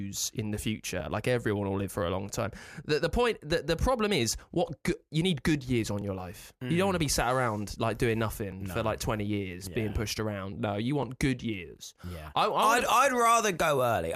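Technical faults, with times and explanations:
1.00, 3.51, 6.02, 8.52 and 11.03 s: overlapping chunks. Each 2.5 s chunk starts 6.5 ms before the previous one ends, so that sliver plays twice, giving a click every 2.5 s.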